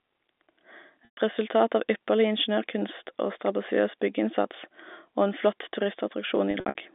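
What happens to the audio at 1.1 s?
The sound freezes into a brief buzzy hold from 1.05 to 1.17 s, fading into silence before recovering with a short cross-fade just ahead of "resultat av ypperlig ingeniørkunst". This is packet loss with pitch repetition. About 120 ms of audio went missing, which fits a few lost packets, and the receiver bridged the gap by looping the last pitch period. That loop dies away within roughly 50 ms, so the rest of the gap falls silent.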